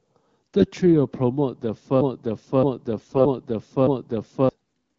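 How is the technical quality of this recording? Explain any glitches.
The speech is marred by two kinds of glitch over light AMR wideband coding at 12.65 kbit/s.

From 2.01 to 4.49 s a 0.62 s fragment repeats four times back to back like a broken-record loop, erasing what should follow. This is likely a stalled player or stream resending its last buffer.

At 0.58 to 0.68 s, 2.98 to 3.21 s and 4.63 to 4.69 s the speech turns briefly hoarse and gargly. These are AMR bit errors: flipped, weakly protected frame bits displace excitation pulses and skew pitch, gain and spectral values.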